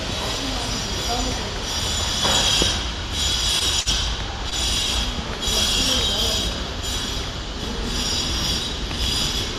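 At 3.81 to 3.89 s and again at 4.50 to 4.55 s, a short stall from a late packet holds the audio: the jitter buffer ran dry and the receiver stretched the last sound, about 51 ms then 19 ms, before resuming intact. On a spectrogram this appears as briefly frozen, smeared bands.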